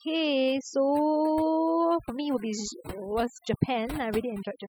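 Throughout the speech, overdone noise removal cuts frequency bands near the noise estimate, leaving near-silent gaps with twinkling specks.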